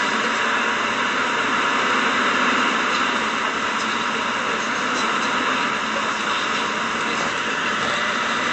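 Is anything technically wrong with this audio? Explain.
Yes. Throughout the clip, the audio shows plainly audible MP3 compression damage. Nothing is heard above about 8.3 kHz, so the treble is cut off flat. Quiet detail sounds watery and swirly. The likely cause is an MP3 encoder short of bits, which fits a low bitrate of around 48 kbps. With so few bits, the encoder drops the top band entirely. It also zeroes weak frequency lines, which flicker on and off from frame to frame.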